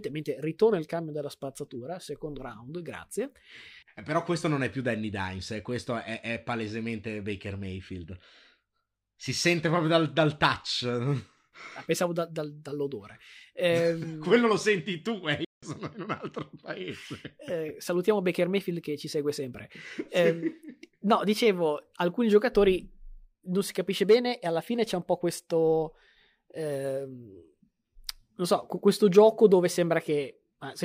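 A playback stall interrupts the speech from 15.45 to 15.63 s: the output drops to silence for about 0.18 s in mid-flow, then resumes with "sono in un altro". The gap is short but abrupt. The likely cause is that the player briefly ran out of buffered data or its audio thread was held up, so nothing was sent to the output until it caught up.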